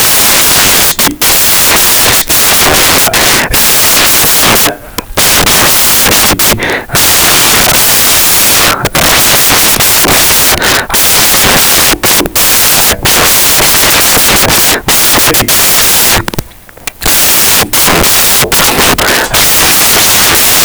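From start to finish, samples built from the wrong bytes scramble each value, pushing fast-changing low bits to the top, so the speech comes with loud, harsh broadband noise, close to white on the loud sounds.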